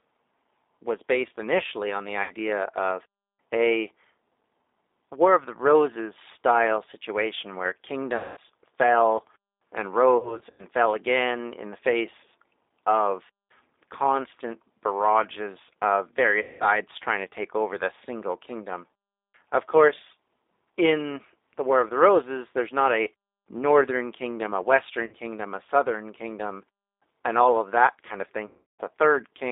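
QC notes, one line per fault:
Throughout: G.729 codec. The speech is band-limited to about 300 Hz to 3.7 kHz and coded at 8 kbit/s. The decoder rebuilds it from a vocal tract filter, a pitch predictor and sparse pulses, so it sounds plainly rough and synthetic.
2.23–2.33 s, 8.16–8.38 s, 10.17–10.64 s, 16.42–16.68 s, 25.06–25.15 s, 28.46–28.81 s: VoIP packet loss concealed by the speech codec. Gaps run from 60 ms to 330 ms, which fits lost 30 ms packets. The one at 10.17 s is scattered over 420 ms. The decoder stretches the last pitch and filter into a fading buzz or coloured noise, and the sound stays weak briefly after.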